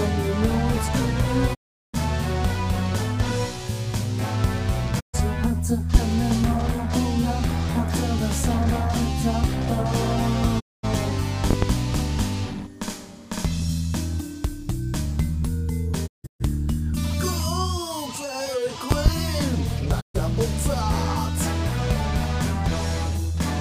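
At 1.53 to 1.96 s the sound briefly fades to silence in a digital broadcast dropout. The receiver muted over lost frames, and the missing audio never returns. A loud pop comes at 5.95 to 5.99 s, an abrupt thump about 20 dB above the sound, likely from a voltage spike. Unlike a dropout, the sound carries on underneath it. Further dropouts fall at 4.99 to 5.16 s, 10.59 to 10.85 s and 16.06 to 16.42 s, where the last splinters into several holes, and at 20.00 to 20.16 s. Each fades out over about 20 ms, and each lost frame is 32 ms long. Double pops strike at 11.51 to 11.66 s and 18.92 to 19.10 s.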